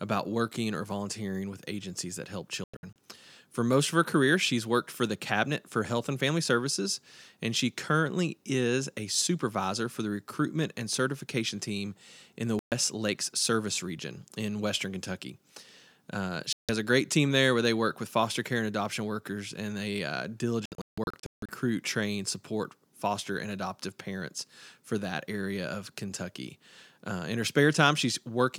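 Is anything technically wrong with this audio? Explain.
Yes. There are four digital broadcast dropouts: 2.64 to 2.96 s; 12.59 to 12.72 s, after "certification team in the"; 16.53 to 16.69 s, before "a great team there"; and 20.66 to 21.49 s, between "workers and they uh" and "train support foster and". The receiver lost the signal or received frames that failed their check. It muted until good frames returned. The speech drops to silence, then resumes. What fell in the gaps is gone. The first and last dropouts break into several short holes. The longest holes are 96 ms and 160 ms.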